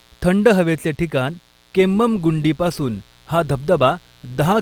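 A steady, raspy buzz runs quietly beneath the speech throughout. It is mains buzz: 60 Hz switching spikes leak in twice per cycle, spreading harmonics high up the spectrum.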